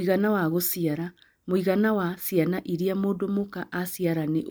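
No technical faults can be heard in this recording.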